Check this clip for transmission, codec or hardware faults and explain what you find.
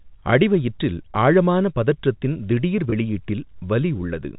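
Two brief glitches interrupt the speech: packet loss with pitch repetition, at 1.13 s and again from 2.90 to 2.92 s.

Each sounds like a tiny held, slightly buzzy stretch, as if the speech briefly sticks on one tone before carrying on. The cause is a gap of 20 ms in the received stream, which fits one lost packet each time. The receiver covers the hole by replaying the most recent pitch cycle. Because each gap is so short, you hear a momentary sustained buzz rather than a fade into silence. The speech travels as G.711 mu-law telephone audio, which accounts for the narrow, phone-like band heard throughout.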